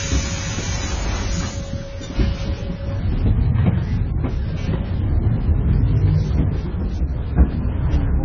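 A clip of sounds that is dull and smeared throughout, with nothing above 7 kHz and a fizzy, warbling texture. This heavy damage is likely AAC compression, consistent with AAC-LC near 16 kbps. A spectrogram would show a hard ceiling at 7 kHz.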